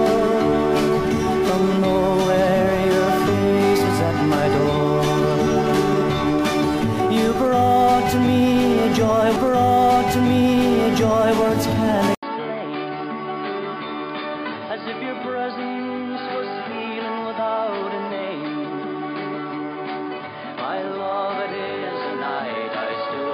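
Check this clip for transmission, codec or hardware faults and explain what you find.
From 12.15 s to the end, after a brief 80 ms silence, the sound turns dull and quieter, nothing above 4.9 kHz, with fresh background noise; likely an input switched to a poorer device.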